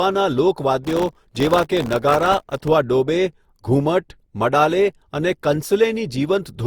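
From the start and through all of the speech, the sound is swirly, smeared and hollow, with blurred consonant attacks, more damage than a single 64 kbit/s pass would cause. That points to generation loss, likely from several rounds of Opus decoding and re-encoding, each re-quantising on a shifted frame grid.

Between 0.85 and 2.68 s, processor overload crackle rides on top: a dense, gritty tearing made of many tiny dropouts to silence, each under a millisecond. Unlike a single dropout or a click, it is a sustained run of missed buffer deadlines that stops abruptly once the load clears.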